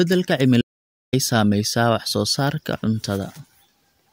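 At 0.61 s the speech cuts out abruptly and stays silent until 1.13 s, with no room tone, an audio dropout to silence lasting 0.51 s. The input was likely lost while the recorder kept writing silence. Speech resumes mid-flow on "saamaysaa wax soo".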